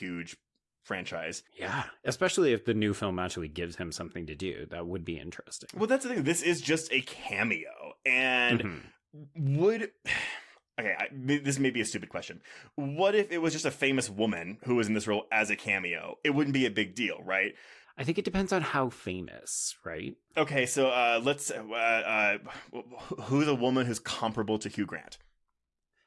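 Speech recording with no audible technical faults anywhere.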